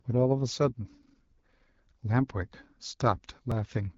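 From start to finish the speech carries AMR wideband (HD Voice) codec damage. The sound is rough and raspy, which points to one of the lowest AMR-WB modes, around 8.85 kbit/s. On a spectrogram the band above 6.4 kHz shows only smeared noise, and nothing appears above 7.5 kHz.

From 0.54 s to 3.52 s, periodic USB or driver dropouts cause a regular tick about every 0.5 s, roughly seven in all. Each time, a few milliseconds of audio are skipped outright. The waveform shows small, evenly spaced splice discontinuities, and the spectrogram shows thin vertical broadband lines.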